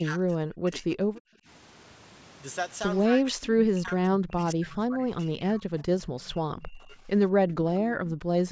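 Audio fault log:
0.00–1.48 s, 3.08–5.73 s, 5.97–7.08 s and 8.43–8.49 s, speech suppressed in double talk: the voice sinks and breaks up in patches, falling by as much as about 35 dB in the opening stretch, about 25 dB in the middle and about 20 dB near 6 to 7 s, with a last brief 60 ms dip just before the end. The likely cause is the far side talking at the same time, so the echo canceller could not tell this talker from its own loudspeaker echo and pulled both down.
7.79–7.85 s, echo leak: a faint ghost of the voice arrives 192 ms late, sitting about 20 dB under the direct speech, as a short scrap. This is likely a loudspeaker at one end whose echo canceller missed part of what the microphone picked up, so a fragment of the returned signal slipped through and was sent back.
7.86–8.15 s, background gated by the echo canceller: right after the echo scrap, the room tone ducks by about 14 dB for roughly a third of a second, then comes back. 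The canceller clamped the microphone hard while the loudspeaker was active and released it once playback eased.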